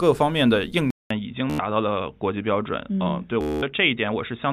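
At 0.90 s the sound drops out for about 200 ms and returns duller and quieter, roughly 5 dB down, with nothing above 3.8 kHz and a new, low noise floor. This is an input switched to a poorer device, likely a narrower-band microphone or headset profile, and it lasts to the end.

Bluetooth stutter occurs at 1.50 to 1.59 s and again at 3.41 to 3.63 s, where lost or late packets made the receiver replay its last buffer. A short slice repeats for about 93 ms and 213 ms respectively, and the sound then resumes further on, as though it had kept playing.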